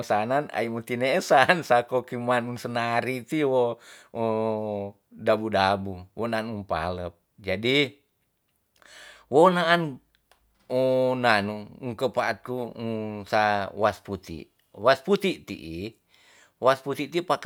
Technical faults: none

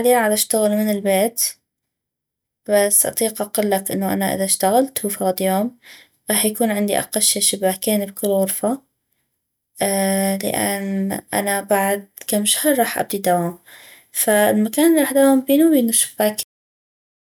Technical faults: cut-off end

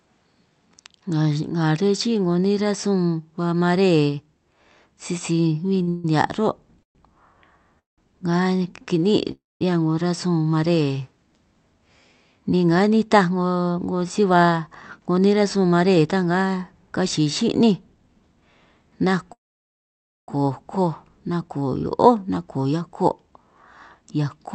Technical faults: short stall from a late packet; call audio freeze; jitter buffer speed-up

